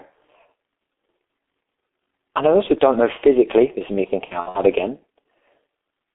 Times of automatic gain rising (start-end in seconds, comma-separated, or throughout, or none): none